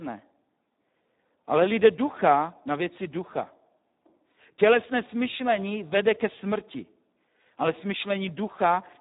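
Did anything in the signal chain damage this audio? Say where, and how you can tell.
Yes, at the codec stage: the whole clip carries heavy Speex codec damage. The speech sounds noisy and hoarse, because a CELP coder this starved has few bits left for the excitation, and nothing sits above 3.8 kHz, which fits a rate around 8 kbps.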